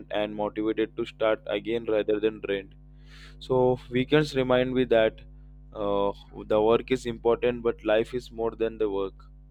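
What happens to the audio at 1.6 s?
At 1.6 s you're hearing crude rate conversion, which runs through the whole clip. The speech was stretched from 32 kHz to 44.1 kHz by plain linear interpolation with no filter, leaving a faint inharmonic fizz, roughly 45 dB down, riding on louder, brighter sounds.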